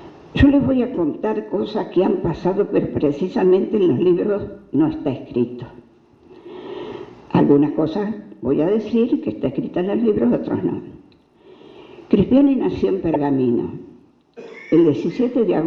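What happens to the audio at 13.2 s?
A corrupt frame decoded lands just before that point, from 13.14 to 13.16 s: one damaged compressed frame was played back anyway, scattering energy to wrong frequencies as a loud squeak or blip with an error peak around -5 dBFS, visible as a brief burst of misplaced energy and a sharp waveform spike.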